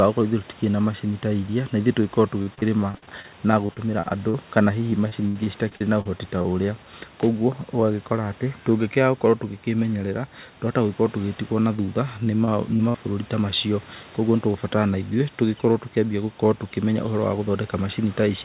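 Repeated packet loss (robotic sound) first appears from 2.42 to 3.27 s, again from 3.66 to 4.35 s, and from 4.91 to 6.45 s. Packets repeatedly failed to arrive in time, and the receiver bridged each hole by extending the preceding sound. Gaps of up to 75 ms follow each other closely, with roughly a sixth to a quarter of each stretch synthesised, so the speech turns choppy, with fragments missing.

Short concealed packet loss occurs at 11.77 to 11.79 s and at 11.86 to 11.88 s. About 10 ms went missing each time. The decoder filled the hole by continuing the last sound, then blended back into the real signal, leaving a brief smear or wobble.

Repeated packet loss returns from 12.25 to 12.98 s, just before "ta macio". Six gaps, the longest 53 ms, give the same robotic, broken texture. All of this sits within narrowband audio with nothing above 4 kHz, which fits a G.711-style telephone codec.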